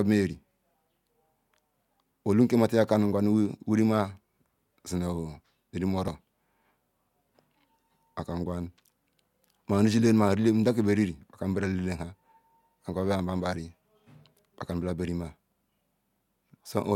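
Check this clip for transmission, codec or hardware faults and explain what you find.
There is one fault. An overlap between stream segments occurs at 6.08 s in this speech clip: two consecutive segments, which appear to be about 4 s long, claim overlapping time stamps, so the player trims the overlapping portion. A few milliseconds of genuine audio disappear and the waveform jumps, producing a brief click or tiny skip.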